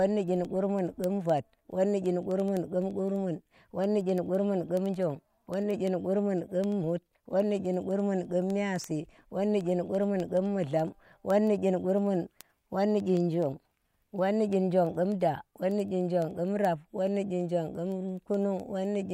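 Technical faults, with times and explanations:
0.11–19.11 s, word clock ticks: an unlocked receiving clock slips roughly every 0.1 s, dropping or repeating one sample, seen as evenly spaced thin vertical spectrogram lines.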